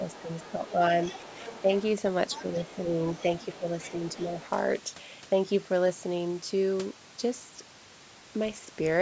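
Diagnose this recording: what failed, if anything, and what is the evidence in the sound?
The call's echo canceller likely failed to tell the near talker from loudspeaker echo while both sides spoke, and its suppressor turned the talker's speech down along with the echo. This is speech suppressed in double talk, a call-processing fault. The speech dips in short bursts within 0.0–0.8 s and 3.59–4.38 s, falling by about 10 dB. Shallower dips of about 5 dB occur at 1.62–1.69 s and within 2.42–3.03 s.

In the same call-processing stage, echo cancellation likely left part of the loudspeaker signal in the microphone path, so the other side's voice leaks through. From 0.1 s to 4.45 s a second, quieter voice sits roughly 20 dB below the main speech. The leak overlaps the suppression dips. The call's band limit, with nothing above 8 kHz, is normal microphone processing.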